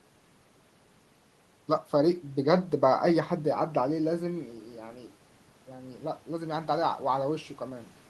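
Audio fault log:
5.68–7.97 s, automatic gain rising: after the input level fell by about 10 dB, the gain control judged it too quiet and raised its gain by about 5 dB over some two seconds, so voice and room noise swell together.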